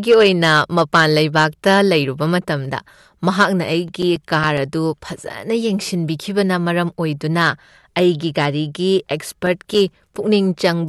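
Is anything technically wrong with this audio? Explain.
Yes, CD scratch ticks. A blemish on the disc corrupted more data each revolution than error correction could restore, so the player patched over the damage. In this speech, that causes regular ticks, up to around 5 ms long: 8 between 3.74 and 4.71 s, and 7 between 9.33 and 10.16 s.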